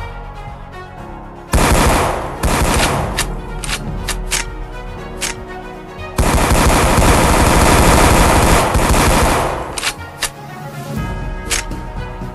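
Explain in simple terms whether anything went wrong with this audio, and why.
Something did go wrong. From 2.01 s to 8.61 s there is a doubled audio track. The same sound plays twice, with the second copy trailing about a second behind the first. That copy is a little quieter but just as clear. It has no fading tail or room echo. It switches on and off abruptly at those two times. The likely cause is the sound being captured a second time through a slower path.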